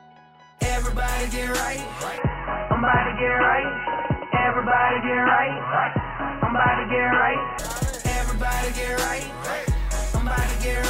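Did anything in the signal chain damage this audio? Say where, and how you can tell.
Yes. From 2.18 s to 7.59 s the sound turns dull and boxy, with nothing above 3 kHz, a new noise floor some 35 dB below the signal, and no gap or level change at either edge. This points to an input switched to a poorer device at the driver stage, likely a narrowband headset profile.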